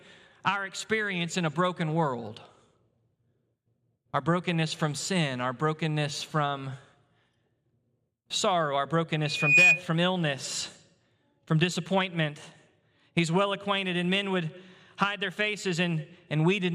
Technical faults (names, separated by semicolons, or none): loudspeaker feedback squeal